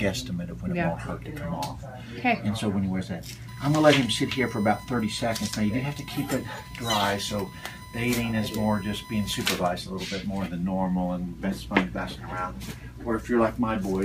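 Current drawn by the USB bus in 1 ms frames is leaking into the audio through the power or ground connection, producing USB whine from 3.48 s to 9.44 s. The 1 ms frame rate gives a steady, fixed-pitch tone at 1 kHz, which is also its strongest component. It sits roughly 20 dB below the rest of the sound, heard as a thin, constant whistle riding over the audio until it stops at 9.44 s.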